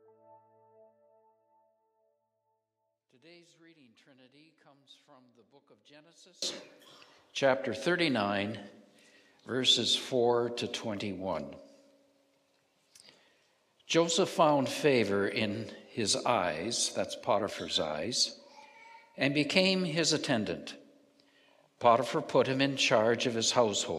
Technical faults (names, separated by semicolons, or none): one channel inverted